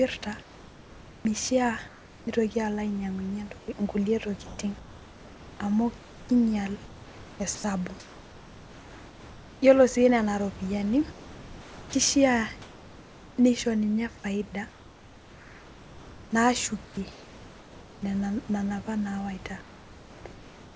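From 0.41 to 2.27 s, 3.59 to 9.62 s, 11.12 to 13.37 s (ending just before "nisho ninye faida"), 14.69 to 18.02 s (ending before "nena nena apa nawaita") and 19.61 s to the end, the room background gives way to comfort noise in place of the background. This is likely discontinuous transmission filling the pauses. On a spectrogram these spans show as flat, uniform noise without texture, and the waveform floor looks smooth. At 7.55 to 7.64 s, 90 ms of sound is likely dropped by the voice detector and replaced by the same steady noise, which shows as a brief gap in the energy. Everything sits below 8 kHz, which fits a wideband call codec.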